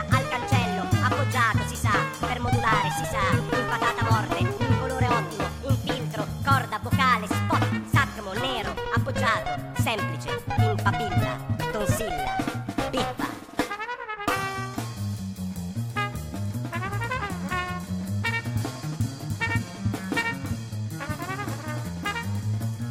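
From start to finish the sound runs about 1.38 times too fast and sits roughly 5.5 semitones high, bright and hurried. That is a wrong sample rate: audio captured at one rate was replayed faster without conversion, which fits 32 kHz material played at 44.1 kHz.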